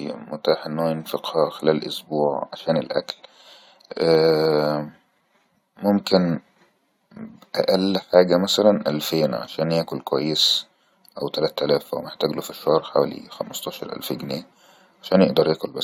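No technical faults can be heard anywhere in this recording.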